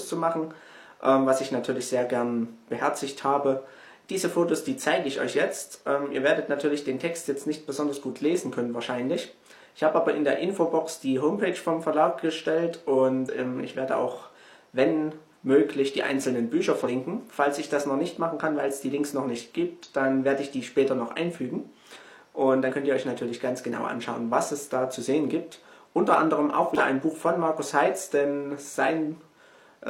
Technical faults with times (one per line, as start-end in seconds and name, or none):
13.24-13.28 damaged data in a compressed stream
16.81-16.87 damaged data in a compressed stream
19.83 damaged data in a compressed stream
22.67-22.73 damaged data in a compressed stream
26.75-26.78 damaged data in a compressed stream